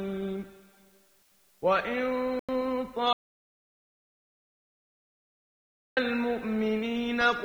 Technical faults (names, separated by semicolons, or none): low bit depth with dither; corrupt frame muted; audio dropout to silence; corrupt FLAC frame